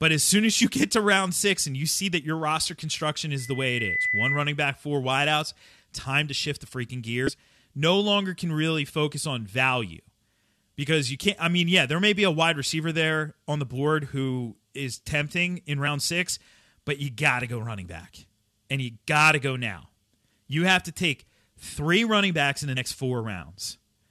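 From 3.39 to 4.54 s, right after "that your roster construction", a loudspeaker feedback squeal appears. A microphone is picking up the loudspeaker it feeds, and at 2 kHz the loop gain passes unity, so a pure tone builds over roughly 0.7 s to about the speech level before stopping ahead of "back four wideouts time".

At 7.27 to 7.29 s, after "to shift the freaking", and again at 22.76 s, after "running backs in the", compressed frames are skipped. The decoder never plays some frames, so each time the speech jumps ahead by around 70 ms.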